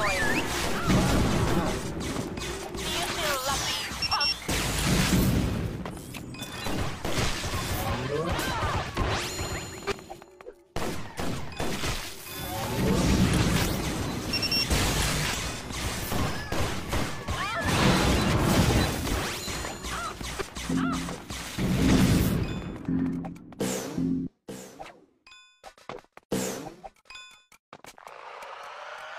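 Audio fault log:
No audible faults detected.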